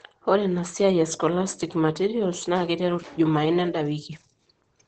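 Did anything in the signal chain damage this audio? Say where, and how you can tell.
Yes: the codec stage. Across the whole clip the speech is muffled and hoarse, with nothing above 8.9 kHz. That is likely Opus compression in its speech (SILK) mode, fitting a rate near 12 kbps. The hoarse texture without MP3-style swirl marks this codec rather than a plain low-pass filter.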